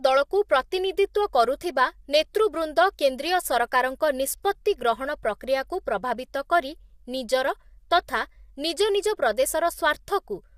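From start to finish the speech sounds rough and grainy, with a hiss sitting between the harmonics and a top band that seems dulled or synthetic; the damage is plainly audible throughout. This is most likely low-delay AAC compression, the AAC-ELD codec of video calls, working at a low bitrate that fits about 32 kbps. Its very short frames separate pitch harmonics poorly and spend extra bits, so the voice's fine structure breaks down into noise.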